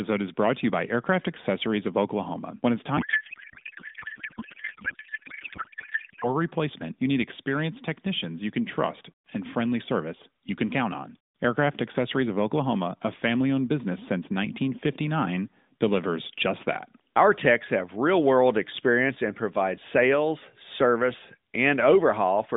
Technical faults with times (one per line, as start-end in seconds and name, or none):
2.98-6.36 codec payload misread